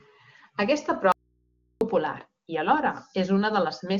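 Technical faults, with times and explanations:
1.12–1.81 s, audio dropout to a faint residue: the incoming signal was likely lost for about 0.69 s while the path after it stayed live. The speech cuts out abruptly, leaving only mains hum roughly 45 dB below speech level until "popular i alhora" resumes.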